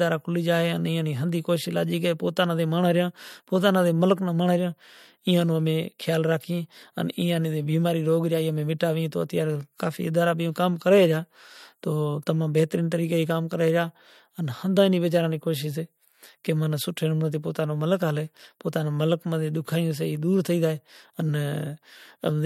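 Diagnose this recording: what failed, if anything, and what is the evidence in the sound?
The codec stage failed with pre-echo. At 8.79 s a short hiss, about 10 dB above the background, arrives roughly 12 ms before a sharp attack. That attack sounds softened. Quantisation noise was spread across a block of about 26 ms, which points to the encoder never switching to short blocks.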